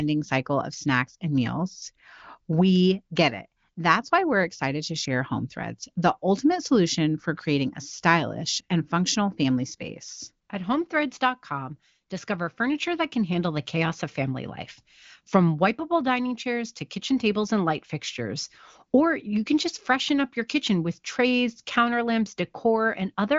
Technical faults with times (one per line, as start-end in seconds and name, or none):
none